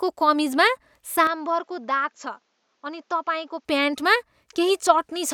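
A speech recording with a change of sound in the middle. From 1.27 s to 3.65 s, the sound turns duller and thinner. Nothing is heard above 7.6 kHz. The level drops by about 5 dB, and a faint new background noise appears, roughly 45 dB below the speech. There is no gap at either switch. The likely cause is an input switched to a poorer device, which was then switched back.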